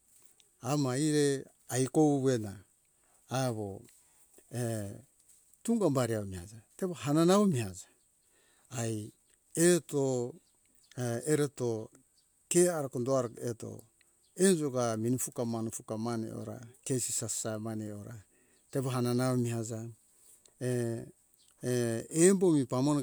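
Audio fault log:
No fault is heard in this speech clip.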